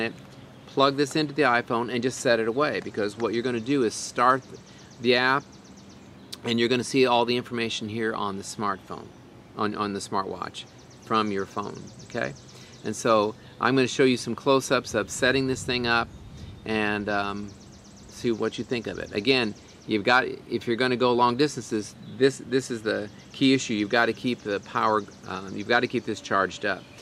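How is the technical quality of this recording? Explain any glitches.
No glitches can be heard anywhere in the recording. The audio runs without any dropouts, clicks, distortion or other technical disturbances.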